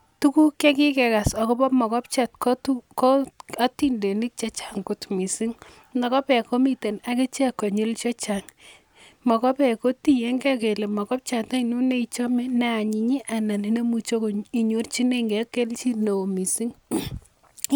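A speech recording with nothing technically wrong with it.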